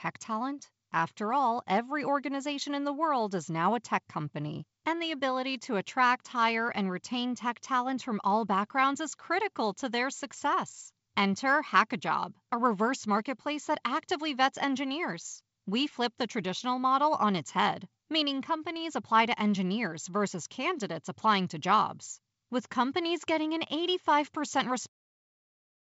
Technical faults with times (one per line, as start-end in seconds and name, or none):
none